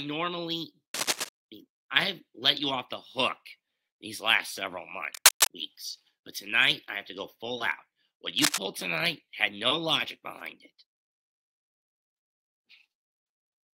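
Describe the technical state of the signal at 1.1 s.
At 1.1 s there is cable scratch noise, from 0.94 to 1.29 s. Dense, ragged scratching sits about as loud as the sound. A worn, moving connector is the likely cause.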